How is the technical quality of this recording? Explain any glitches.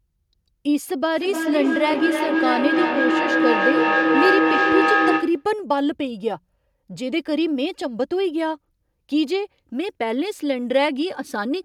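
The recording has one clear fault. From 1.15 to 5.51 s there is feedback echo between two devices. Speech returns about every 300 ms. Each pass is thinner and more ringing. The loop is loud. Repeats build to about 2 dB above the speech instead of fading. A second device plays the sound back into the microphone, and that echo canceller cannot remove it.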